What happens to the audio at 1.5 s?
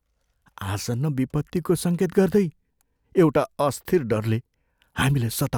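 Nothing goes wrong at 1.5 s; the speech carries on cleanly through that moment with no dropout, click or distortion.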